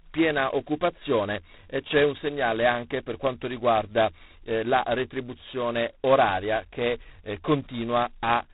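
Throughout, heavy G.726 ADPCM, consistent with 16 kbit/s, quantises prediction errors coarsely: a rasping hiss follows the speech level, and the spectrogram stops at 4 kHz.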